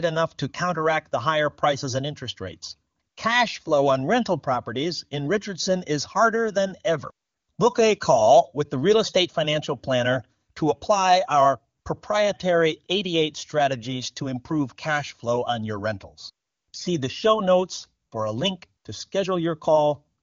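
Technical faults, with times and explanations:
No technical faults can be heard in this speech clip. It carries the band-limited sound of AMR wideband (HD Voice) coding with at most faint codec traces, which points to one of the codec's highest rates, around 24 kbit/s.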